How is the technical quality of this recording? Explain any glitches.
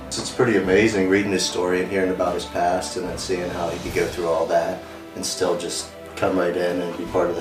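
No technical glitches can be heard in the recording, and the signal stays steady and intact throughout.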